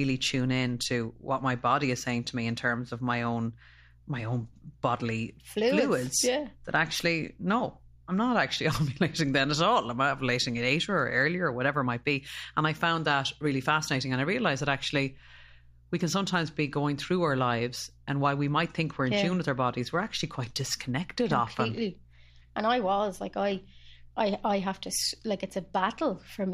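A speech recording carries mains hum from start to finish. It is a steady 60 Hz tone, roughly 30 dB below the speech, from a ground loop or nearby transformer.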